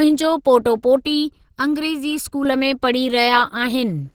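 A speech recording in which plainly audible codec damage runs throughout. The voice sounds hoarse and somewhat muffled, with a grainy texture rather than the swirling holes of MP3, which points to Opus compression in its hybrid speech mode, likely at a low rate around 16 kbps. Content still reaches about 20.2 kHz. From 1.05 to 2.45 s, channel delay (comb filtering) adds a hollow, phasey colour. One channel arrives late by under a millisecond, and when the two are summed to mono the shared sound cancels at evenly spaced frequencies, starting near 700 Hz. Unlike the codec's grain, these notches stay fixed and are confined to that stretch.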